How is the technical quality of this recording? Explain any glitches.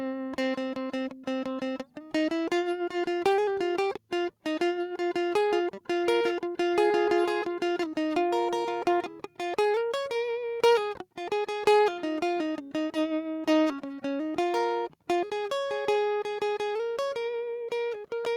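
The technical quality of this music recording is sound, with no glitches to explain.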